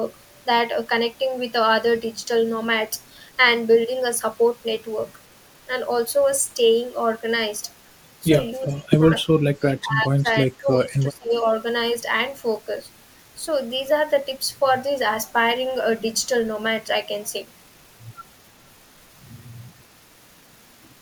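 An echo canceller was likely unable to tell the near talker from loudspeaker echo while both sides spoke at once, so it turned the speech down: speech suppressed in double talk. The speech dips briefly by around 15 dB from 8.65 to 8.9 s, then sinks far deeper, roughly 25 dB, from 9.32 to 10.27 s, and drops again by about 20 dB from 10.47 to 11.45 s.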